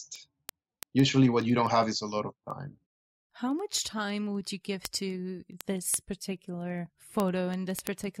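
From about 0.16 s right through to the end of the speech there's a steady run of word clock ticks, roughly ten a second, so something like a hundred in all. The receiving device isn't locked to the sender's clock, and the two drift apart by a few hundred parts per million. Each time they slip past each other, one sample gets dropped or repeated, and that glitch comes through as a sharp tick, uneven in strength but coming at a steady rate.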